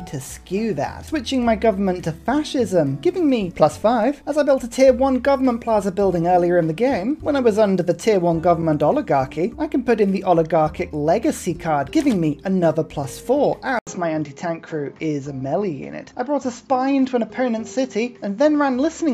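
At 13.79 s the sound drops out for about 80 ms, then returns dull, with nothing above 7.6 kHz and a faint new noise floor well below the signal, level unchanged. That's likely an input switched to a poorer device, which then carries on to the end.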